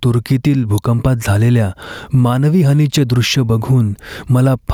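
Gain pumping runs through the whole clip: the gain swings around 15 dB, pulled down on each loud syllable, likely from heavy limiting on an over-hot mic.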